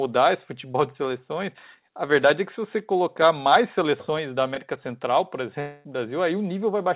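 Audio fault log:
0.72–0.76 s and 4.54–4.58 s, short concealed packet loss: each is a brief smeared, wobbly blip lasting about 20 ms, the first just before "de seleções" and the second just after "colocar mais seleções da". A few hundredths of a second of audio failed to reach the decoder in time, so the receiver stretched the preceding sound to cover the hole and then blended back into the real signal. The G.711 mu-law call path also keeps everything below 4 kHz, and the patches carry that same narrowband tone.
5.60–5.86 s, long network dropout: the sound turns into a continuation of the last sound that fades for roughly a quarter of a second, with no true silence, and then resumes with about 240 ms of material simply gone. The likely cause is a network dropout in which no packets arrived for that stretch. The receiver covered the whole gap by extending the last sound, and the missing audio was never played.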